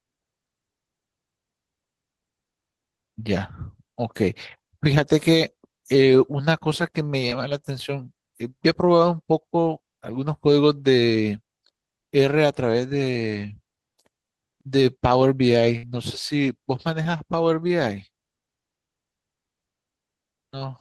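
A speech recording with two kinds of transmission fault. Short concealed packet loss occurs at 7.29–7.33 s and again at 17.03–17.07 s. In each, about 20 ms of audio failed to reach the decoder in time. The receiver bridged the hole by extending the preceding sound for roughly 16 ms and 20 ms respectively, then crossfaded back into the real signal, leaving a brief smear or wobble where the missing fragment should be. A burst of packet loss at 15.77–15.85 s is longer. About 60 ms of consecutive audio was lost, and the decoder synthesised 60 ms of continuation from the last received sound, attenuating it across the gap, so the sound holds as a fading buzz or hiss before playback resumes further along with that stretch of speech absent.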